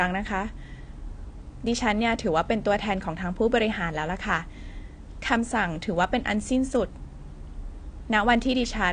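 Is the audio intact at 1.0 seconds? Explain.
No, 1.0 s sits inside AAC compression damage that runs the whole clip. The speech is dull with nothing above 9.7 kHz, and there's a smeared, fizzy edge on sibilants. That's likely AAC-LC starving bands of bits at a low rate, around 32 kbps.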